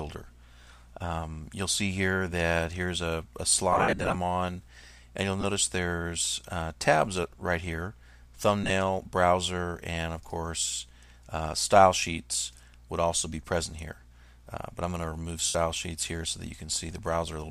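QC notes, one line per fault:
3.73–15.55 s, lost LE Audio frames: four concealment episodes, at 3.73–4.15 s (270 ms missing, scattered over 420 ms, longest run around 70 ms), 5.41–5.44 s (22.5 ms), 8.64–8.71 s (45 ms in short bursts spread over 60 ms) and 15.46–15.55 s (82.5 ms). The LC3 decoder bridges each gap by reusing the last spectrum with randomised signs, so tonal content blurs into a brief noisy smear. The loss sizes fit 7.5 ms frames.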